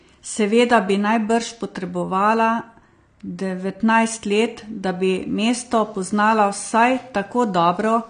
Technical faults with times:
0.00-8.09 AAC compression

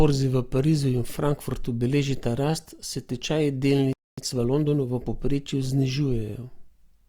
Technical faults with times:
3.93-4.18 playback stall
4.18-5.16 time-compressed catch-up

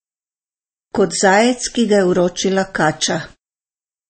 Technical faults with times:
0.00-4.09 MP3 compression

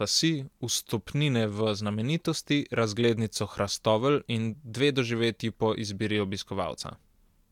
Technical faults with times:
none

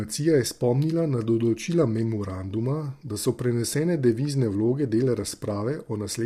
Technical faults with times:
0.00-6.26 low-delay AAC compression

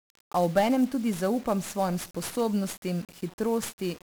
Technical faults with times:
0.00-4.02 1-bit DFPWM compression

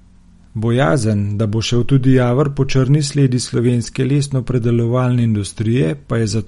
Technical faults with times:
0.00-6.47 MP3 compression

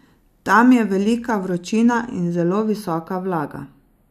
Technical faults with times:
0.00-4.11 channels drifting apart

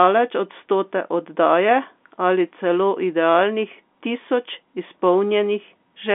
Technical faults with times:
none

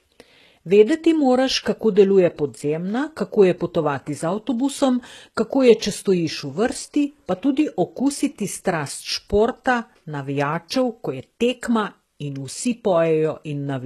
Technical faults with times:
0.00-13.85 HE-AAC compression

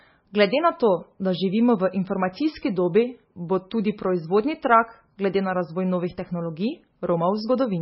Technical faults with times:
0.00-7.82 MP3 compression

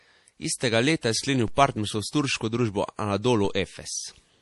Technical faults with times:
0.00-4.41 low-bitrate audio saved at a high bitrate
1.48 DC step
3.45 DC step

